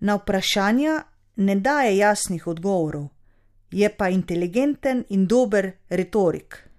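No technical fault can be heard anywhere in this speech recording; the signal stays continuous and stable throughout.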